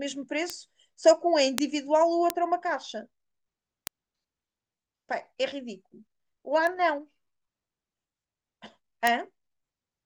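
A single flipped bit, in memory or on a digital link, throws one sample, or at 1.58 s a short run of about three, off by a power of two before the value snaps back. These bit error spikes give sharp, broadband ticks unrelated to the speech at 0.50, 1.58, 2.30, 3.87, 6.67 and 9.07 s. Most peak near about -2 dBFS; the one at 0.50 s reaches about -8 dBFS and the one at 6.67 s is softer, around -14 dBFS.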